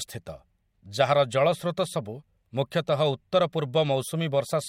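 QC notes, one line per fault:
No faults found in this speech.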